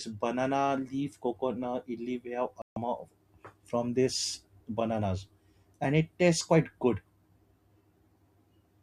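At 2.62 s, just after "we have", a digital broadcast dropout mutes the speech for about 0.15 s, consistent with a handful of corrupted frames being discarded until clean ones returned. The waveform shows a flat gap and the spectrogram a blank vertical band, with the speech lost rather than delayed.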